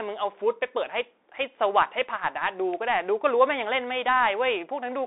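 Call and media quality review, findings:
Bluetooth CVSD headset codec, whole clip: speech band-limited to roughly 300 Hz–3.7 kHz, nothing above 3.8 kHz. One-bit delta modulation, consistent with a 64 kbps link, with adaptive step lagging loud high content. Scratchy sibilants, granular hiss; codec damage plainly audible.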